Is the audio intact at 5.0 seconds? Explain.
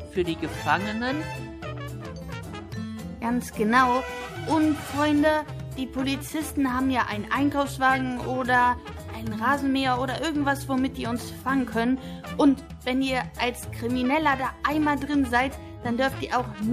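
No. At 4.98 s, just before the 5.0 s mark, there is a corrupt frame decoded: a compressed frame arrived with flipped bits and the decoder played it instead of concealing it. The misread gains and codes put energy at the wrong frequencies for an instant, heard as a short chirp, squeak, blip or burst of noise peaking around -30 dBFS. Its brevity points to a couple of damaged frames.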